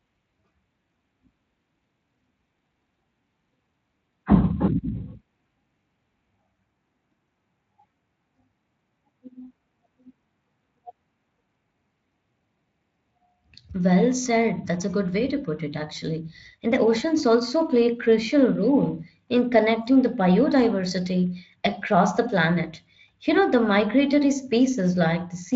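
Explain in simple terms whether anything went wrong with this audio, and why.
Nothing went wrong here: the speech comes across steady and intact the whole way, with no dropouts, glitches or other problems to point to.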